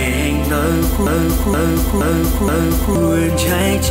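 A broken-record loop from 1.07 to 2.96 s repeats one 0.47 s fragment four times, likely a stalled stream, appearing as identical tiled waveform blocks.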